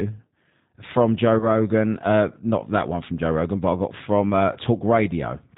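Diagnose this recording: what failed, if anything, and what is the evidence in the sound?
Rough, slightly synthetic speech with nothing above 4 kHz throughout: a codec fault, G.729 coding at 8 kbit/s rebuilding the voice from a filter, pitch predictor and sparse pulses.

From 1.39 to 1.67 s the sound smears into a buzzy tone or coloured noise that fades. This is network packet loss concealed by the speech codec, with a 20 ms gap consistent with one lost packet, and the extrapolation lingering afterwards.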